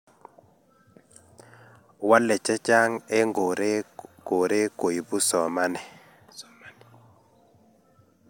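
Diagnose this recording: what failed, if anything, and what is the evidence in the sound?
Nothing failed: no stage from the wiring through to playback leaves any audible trace in this speech recording.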